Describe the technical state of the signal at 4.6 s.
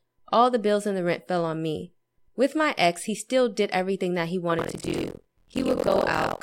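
Buffer tearing begins at 4.57 s and lasts to the end at 6.42 s. Writer and reader cross mid-buffer, splicing in about 40% stale audio, a tenth of a second old. The result is a 43.1 Hz robotic buzz, which fits a 1024-sample buffer.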